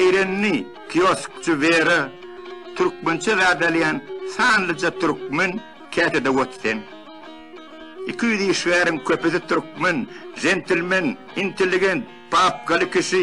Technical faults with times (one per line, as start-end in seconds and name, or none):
none